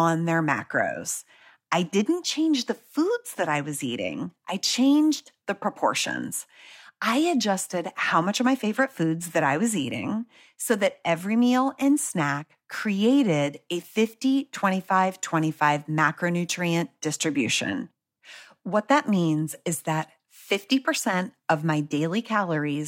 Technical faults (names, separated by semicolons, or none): none